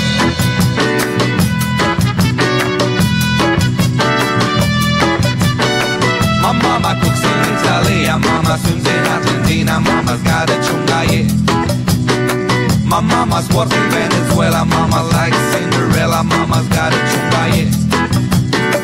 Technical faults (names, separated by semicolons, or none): none